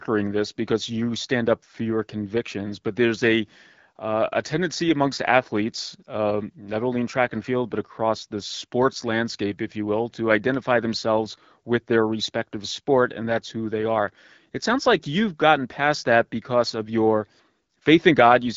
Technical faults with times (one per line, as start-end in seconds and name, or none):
none